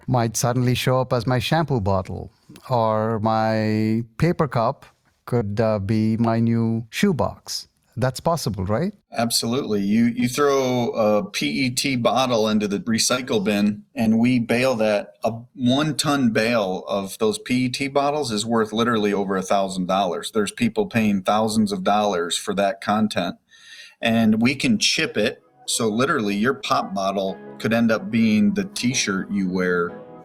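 Short concealed packet loss breaks this call audio four times: at 5.37–5.43 s, where about 40 ms went missing, and at 13.15–13.19 s, 26.61–26.65 s and 28.77–28.81 s, about 20 ms each. Each gap was filled for 15 to 34 ms by extending the preceding sound before crossfading back, so each is a brief smear or wobble. A spectrogram shows short, flattened harmonic stretches or noise patches with soft edges.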